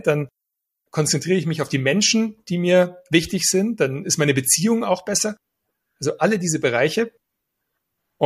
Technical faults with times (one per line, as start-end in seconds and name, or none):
none